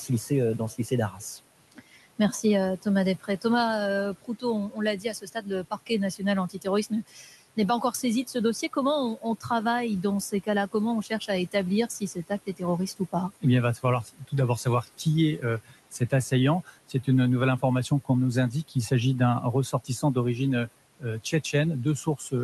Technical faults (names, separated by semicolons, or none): noise suppressor artifacts; speech cut by the noise suppressor